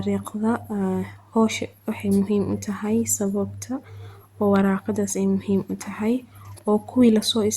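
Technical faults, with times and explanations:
No technical faults are present, so there are no times or explanations to give.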